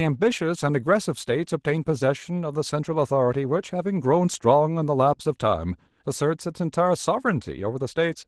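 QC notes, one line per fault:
Throughout: Opus voice compression. The speech sounds hoarse and slightly robotic, with a plainly audible grainy roughness, which fits a bitrate around 16 kbps. In hybrid mode a linear-prediction coder handles the band below 8 kHz and describes the excitation only coarsely, which adds the buzz. A transform layer covers the upper band to full bandwidth, in 20 ms frames.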